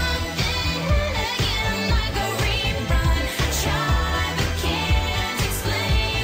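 No technical faults can be heard anywhere in the recording, and the signal holds steady throughout without any dropout, distortion or other disturbance.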